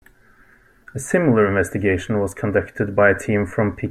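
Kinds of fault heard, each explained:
No technical fault can be heard in this speech recording. There is nothing to list for it.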